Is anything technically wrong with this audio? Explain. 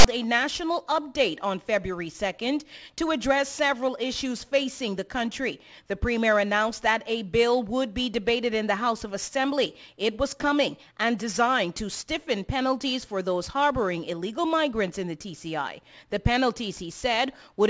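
Yes. File tags played as audio occur from 0.00 to 0.05 s: a block of text metadata at the start is decoded as sample data, so its character bytes become a loud, harsh rasp pushed off to one side, starting and stopping abruptly before the real sound begins.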